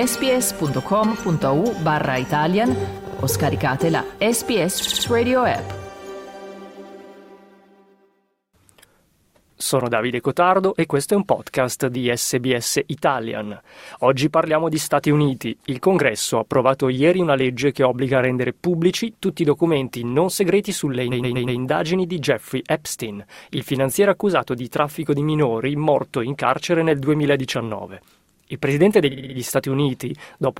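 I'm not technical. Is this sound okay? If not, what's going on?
No, it has repeated frames: a tiny slice of sound plays again several times in a row, like a quick stutter. This happens at 3.07 to 3.20 s, 4.81 to 5.05 s, 21.11 to 21.59 s and 29.11 to 29.36 s. Unlike a dropout, nothing goes missing. The same moment is replayed, which adds between about a tenth and half a second each time.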